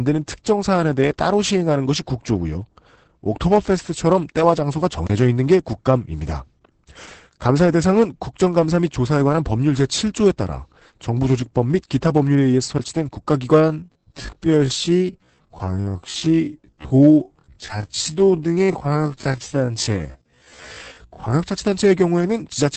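Opus voice compression runs throughout: the SILK coder discards everything above 8 kHz and codes the excitation coarsely, which fits a bitrate near 10 kbps, leaving the speech muffled, hoarse and slightly robotic. A block of digital silence at 5.07 to 5.10 s is a 29 ms run of zeros, likely a late buffer, that cuts in and out abruptly, leaving a short hole. A time-stretched section from 13.52 to 21.32 s plays at 0.53 times normal speed with pitch unchanged, so the pace drops abruptly and the speech drags, likely from repeated short pieces.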